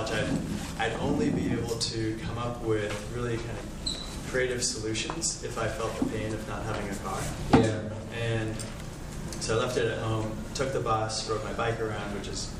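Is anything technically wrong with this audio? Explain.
Yes. There is one fault, a repeated buffer, at 2.90 s. New audio did not reach the output in time. The device replayed its last block instead. That block lasts about 1.45 ms, which fits a 64-sample buffer. It plays three extra times in a row, with a hard join at each repeat. So little time passes that it comes across as a brief click or tiny buzz rather than a stutter. Essentially no audio is lost.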